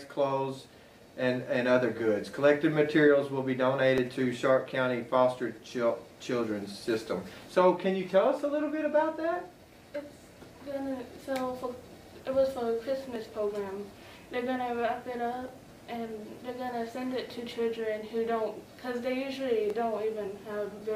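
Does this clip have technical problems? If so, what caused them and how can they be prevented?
Yes, there are four sharp, isolated clicks at 3.98, 13.16, 15.48 and 19.70 s, each showing as a thin vertical line across the spectrum. They sound like dropped samples: a tiny chunk, about 0.7 ms, goes missing, so the waveform jumps straight to a later value and that step is what you hear. The likely cause is the recording or playback chain briefly missing samples. To prevent it, give the audio path a larger buffer and keep competing load off the machine while capturing.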